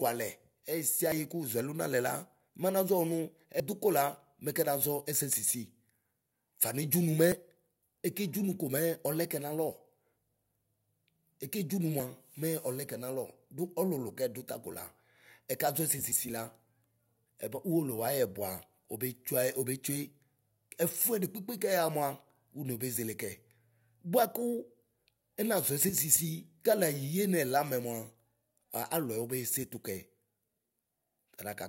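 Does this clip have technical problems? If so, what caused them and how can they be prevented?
Yes. The speech jumps abruptly at 1.12 s, just before "kuʒuɛlu nalɛ", and again at 3.6, 7.32, 12.0 and 16.12 s, with no gap of silence. Each skip removes roughly 40 ms of sound, and the one at 3.6 s removes about 70 ms. The likely cause is a dropped buffer (overrun): the recording software did not read the hardware buffer in time, so it was overwritten. Raising the recording thread's priority or using larger buffers would prevent this.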